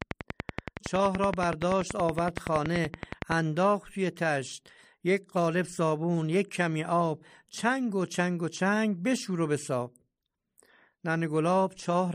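From 0.02 s to 3.33 s, a train of clicks runs over the speech at about 10.6 per second, evenly spaced, about 35 to 40 in all. Each is much the same sharp pop, standing well above the speech. Interference or a faulty connection or power supply is the likely cause.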